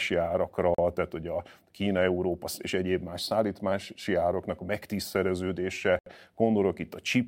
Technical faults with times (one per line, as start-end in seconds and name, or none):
0.75-0.79 Bluetooth stall
5.99-6.06 Bluetooth stall